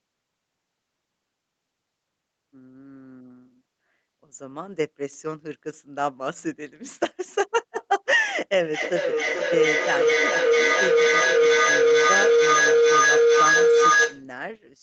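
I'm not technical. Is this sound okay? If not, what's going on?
No. From about 8.74 s until 14.3 s there is a feedback howl: two devices on the same call are in one room, so each microphone picks up the other's loudspeaker and sends the sound round again, louder each time. It swells into a steady tone of roughly 500 Hz, with the sound going round about every 0.4 s, and grows louder than the speech. Ordinary echo fades with each repeat, but this keeps building until the loop is broken.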